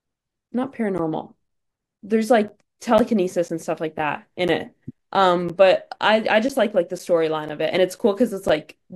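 Periodic USB or driver dropouts, 0.48 s to 8.50 s: a blocked bus silences about 10 ms every 0.5 s, heard as ticks during speech.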